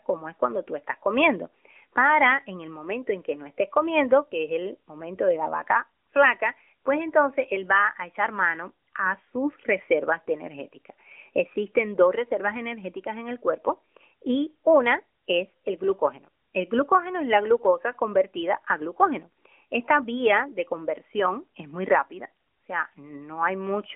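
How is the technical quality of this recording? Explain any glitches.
No glitches or faults can be heard in the recording, which carries the narrowband character of an AMR mobile codec link: the speech sits within the 300 Hz to 3.4 kHz telephone band with nothing above 3.5 kHz, and the light coding texture fits the 12.2 kbps mode.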